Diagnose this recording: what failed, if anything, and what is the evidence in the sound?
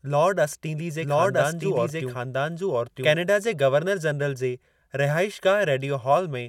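After "लार्ड असटींली", 1.01 to 3.13 s holds a dry, equally loud copy about a second late: a doubled audio track, likely from a second, slower capture path.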